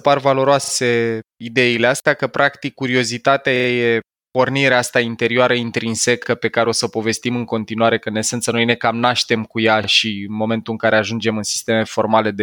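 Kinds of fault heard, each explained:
Repeated buffer: new audio arrived late, so a short block played again, which fits a 40 ms buffer. The speech stutters four times, with hard joins.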